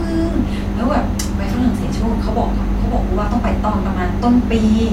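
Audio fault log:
No audible faults were found in this speech clip.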